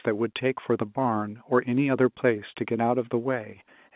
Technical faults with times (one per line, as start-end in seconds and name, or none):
none